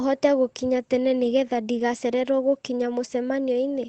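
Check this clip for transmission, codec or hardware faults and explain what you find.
One transmission fault is audible in this speech clip, carried over an Opus call path whose sound stops near 8 kHz.

At 1.79 s there is a lost packet rebuilt from error correction. The next packet's low-bitrate copy filled 20 ms, so there is no gap, just a brief rough, noisy patch.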